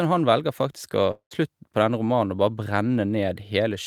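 From 1.11 to 1.33 s the speech smears into a fading buzz, drops briefly to silence, then resumes with about 200 ms of speech missing. This is likely a long network dropout, where the receiver stretched out the last sound until audio returned.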